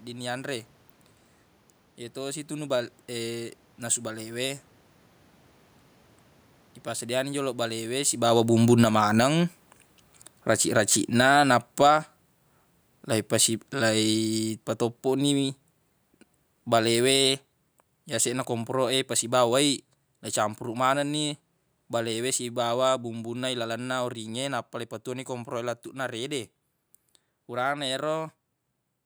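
From 7.32 to 11.97 s, and again from 13.33 to 24.59 s, the speech and the room noise behind it sink together by about 13 dB. Each time, automatic gain falling is at work: the gain control judged the input too loud or its background noise too strong and eased its gain down, separate from the talker shifting position around 8 s.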